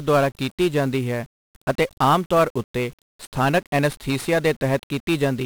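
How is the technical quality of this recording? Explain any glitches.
Pretty rough, honestly. Throughout, the speech carries heavy 1-bit DFPWM compression damage: each sample is just one up-or-down bit, so broadband fuzz, crackle and hiss smother the treble, consistent with a roughly 48 kbps stream.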